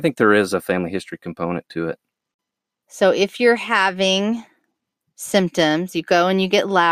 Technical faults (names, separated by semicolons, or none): none